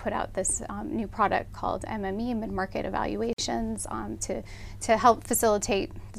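A gap at a join of encoded pieces falls at 3.33 to 3.38 s: a silence of about 51 ms cuts into continuous sound with smeared edges. Separately encoded segments were joined untrimmed, leaving encoder start delay and final-frame padding, before the sound resumes where it stopped.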